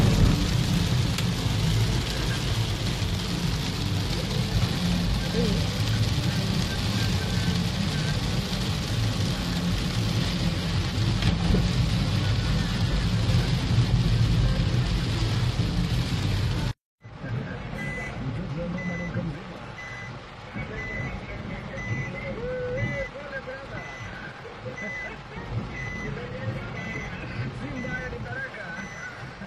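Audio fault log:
10.17 to 28.17 s, adaptive stream at a lower bitrate: quality drops abruptly with no gap as the player switches to a cheaper version, which points to roughly 24 kbit/s HE-AAC. Codec artefacts rise. On a spectrogram the upper band becomes a blocky, patchy replica.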